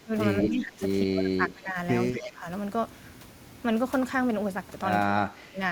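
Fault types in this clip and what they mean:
Speech suppressed in double talk, at 0.0 to 0.13 s, 0.43 to 0.81 s, 1.03 to 1.76 s, 2.12 to 2.46 s and 5.22 to 5.6 s: the speech sinks by roughly 10 to 25 dB in these stretches, the deepest dips at the start and end. The likely cause is an echo canceller that, with both ends talking at once, could not tell the near talker from loudspeaker echo and pulled everything down together.
Echo leak, at 0.40 to 0.49 s and 2.12 to 2.32 s: a delayed copy of the speech returns about 224 to 229 ms behind the original, first at nearly the same level as the speech, then about 15 dB lower. This is likely a far-end loudspeaker whose sound reached its own microphone and was only partly removed by its echo canceller before being sent back down the line.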